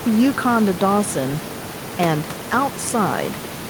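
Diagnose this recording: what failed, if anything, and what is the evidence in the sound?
Nothing in the signal chain has failed in this speech recording. The room noise underneath sits about 12 dB below the speech and belongs to the acoustic space around the microphone, not to any stage of the system.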